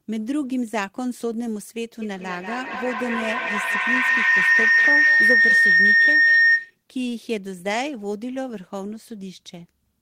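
Speech, with a feedback howl from 2.02 s to 6.81 s. It's two devices on the same call in one room, the loop gaining on every pass and repeating roughly every fifth of a second, so it narrows to a tone around 2 kHz, peaking about 9 dB over the speech.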